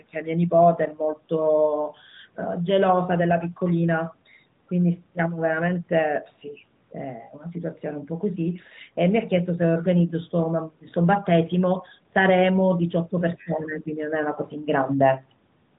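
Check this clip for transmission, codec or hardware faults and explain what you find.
Two short faults sit close together near the end, on narrowband mobile-coded speech with everything above 4 kHz gone.

From 13.37 to 13.46 s, a faint scrap of another voice sounds beneath the talker, about 30 dB down. This is the other side's voice leaking through, likely residual loudspeaker echo the canceller missed.

From 13.44 to 13.87 s, the talker's speech dips by roughly 10 dB for a few tenths of a second. This is speech suppressed in double talk, likely the canceller turning everything down while both sides overlapped.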